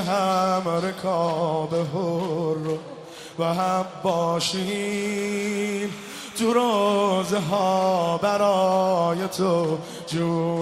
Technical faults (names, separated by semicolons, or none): timecode bleed; corrupt frame decoded